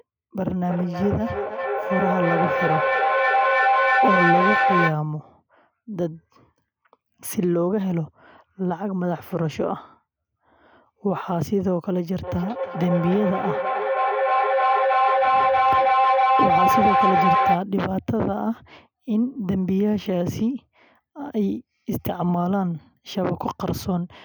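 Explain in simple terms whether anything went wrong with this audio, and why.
Feedback howl from 0.6 to 5.0 s and again from 12.2 to 17.7 s: the speech loops between microphone and loudspeaker, building into a tone near 700 Hz that pulses roughly three times per second.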